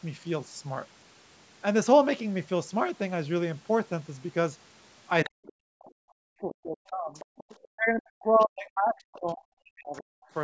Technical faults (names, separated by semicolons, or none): other side's voice leaking through; speech suppressed in double talk